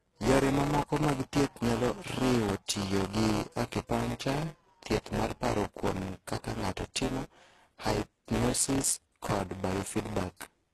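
The clip is speech, and two faults run through all of it. The first is buffer tearing. A robotic buzz at 172 Hz sits on the speech and stops when the sound stops. That rate fits a 256-sample buffer. The writing program and the hardware reading the ring buffer have slipped against each other. So a small slice of each buffer, around a sixth, replays audio from roughly 10 ms earlier, with hard joins on both sides. The second fault shows in the treble. Nothing is present above 12.3 kHz. The damage is plainly audible. The top band sounds rebuilt rather than recorded, with harmonics that do not line up across the crossover. The likely cause is HE-AAC compression, which codes only the lower spectrum and copies it upward by spectral band replication. The amount of damage points to a low bitrate, around 16 kbps.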